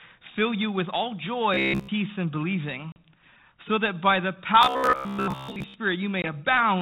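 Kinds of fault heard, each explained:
Robotic sound from repeated short buffers: Just after "fill you with all", from 1.54 to 1.89 s, the speech collapses into a stiff, metallic buzz near 66.7 Hz. It comes back after "so that by the", from 4.62 to 5.74 s. The likely cause is a starved stream padded by looping its last fragment, which fits a 15 ms buffer. The first stretch sounds entirely looped. The second is mostly looped, with some real audio showing through.
Packet loss on an ADPCM call: The call runs on 32 kbit/s G.726, and whole packets drop out and are replaced by silence. A sharp-edged 40 ms hole opens at 2.92 s, which suggests about two packets lost. A 20 ms hole, about one packet, falls between 6.22 and 6.34 s. The decoder's predictor and step size then no longer match the sender's. So the speech comes back slightly distorted before it settles.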